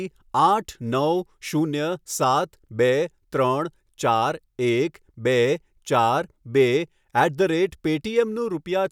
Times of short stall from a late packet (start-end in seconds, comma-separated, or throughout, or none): none